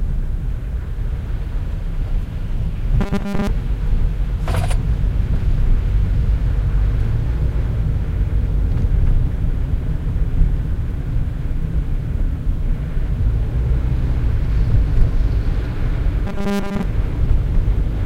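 From 3.01 to 3.47 s, and again from 16.27 to 16.83 s, the sound collapses into a rigid, metallic buzz at 200 Hz. This is robotic sound from repeated short buffers, likely caused by audio arriving too late so that a 5 ms slice is looped in place of most of the real signal. On a spectrogram each stretch shows evenly spaced harmonic lines at multiples of 200 Hz, and the waveform shows an identical short cycle repeating.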